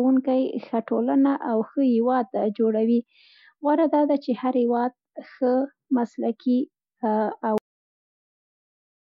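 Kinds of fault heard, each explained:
Cut-off end: the speech stops abruptly at 7.58 s, mid-sound, because the final buffers never played. Digital silence follows, with no natural decay.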